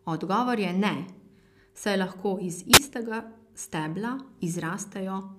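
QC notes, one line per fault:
2.73–2.78 s, wireless microphone squelch dropout: the radio link fades, hiss rises briefly, and the receiver squelch mutes the speech for only a fraction of a millisecond before it returns.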